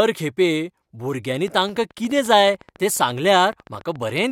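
From 1.48 s to 4.25 s a train of clicks runs under the speech, about forty of them at a steady 14.2 per second, each peaking at roughly the level of the speech itself. It's a regular ticking, even through pauses, and is likely interference from nearby equipment or a faulty connection or power supply.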